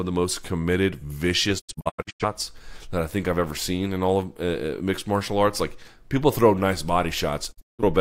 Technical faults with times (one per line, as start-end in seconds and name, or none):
1.58-2.25 digital broadcast dropout
7.51-7.83 digital broadcast dropout